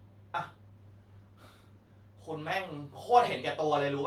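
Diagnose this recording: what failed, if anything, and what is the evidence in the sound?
Call bitrate drop, 0.67 to 3.89 s, in the call codec: the speech turns rough and muffled as the encoder starves, consistent with a fall from 64 to 20 kbps.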